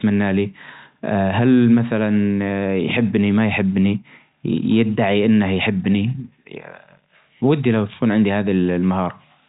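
No technical faults detected.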